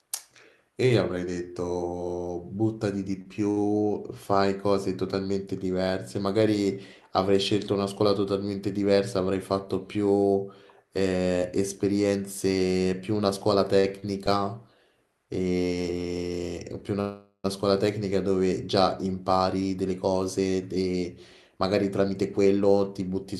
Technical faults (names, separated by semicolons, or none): short stall from a late packet; call audio freeze; jitter buffer speed-up